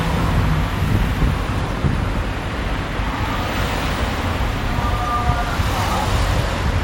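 No technical faults can be heard anywhere in this recording of sounds.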